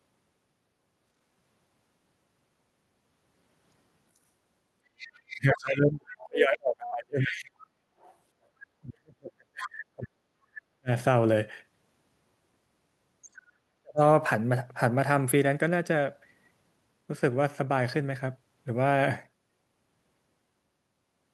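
From 4.98 to 5.57 s, and again at 6.20–6.26, 6.86–6.90, 7.21–7.66 and 8.00–8.14 s, the other side's voice leaks through, faint and scrappy, roughly 15 to 35 dB below the talker. This is likely residual loudspeaker echo, and it is an added second voice, not a loss. Speech is suppressed in double talk from 5.3 to 7.56 s, 8.81 to 10.9 s and 13.81 to 14.01 s. The talker's own voice dips by as much as about 40 dB or cuts out in pieces, likely because the echo canceller turned both voices down while both sides spoke at once.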